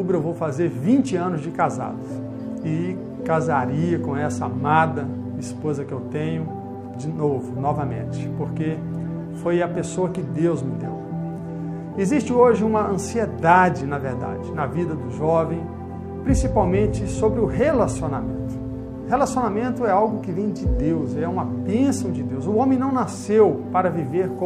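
No technical faults can be heard anywhere in the audio.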